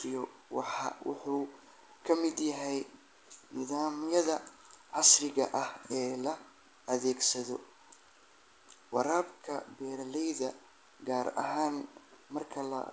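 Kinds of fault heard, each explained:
No faults are heard in this speech. It comes through a WebRTC call path, and nothing sounds above 8 kHz, which fits a wideband call codec such as G.722 at 64 kbps.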